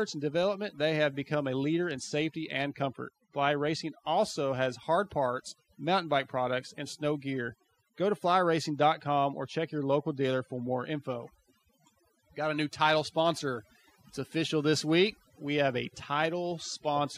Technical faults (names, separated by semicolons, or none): overdone noise removal